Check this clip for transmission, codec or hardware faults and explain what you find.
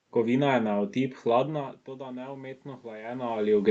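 There's one real fault in this speech clip: automatic gain rising. Right after "je na", at 0.74 s, the input level drops by about 16 dB. The gain control then climbs back by about 6 dB, slowly, until 3.4 s, so voice and room noise swell together over a couple of seconds rather than recovering at once. The top end stopping around 8 kHz is just the call codec's bandwidth.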